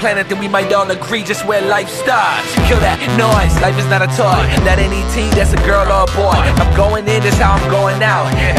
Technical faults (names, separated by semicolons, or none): loose connector crackle